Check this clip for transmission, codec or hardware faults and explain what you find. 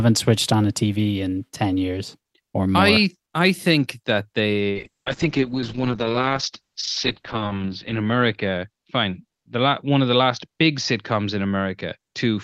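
One fault is present, a call bitrate drop running from 4.72 s to the end of the clip. The bandwidth estimate falls and the encoder codes much more coarsely, consistent with a fall from about 64 to 7 kbps. The speech turns muffled and watery, worst for 2.8 s at the lowest rate. On a spectrogram, energy above 8 kHz vanishes where it previously reached 20 kHz, and the remaining bands look smeared and blocky.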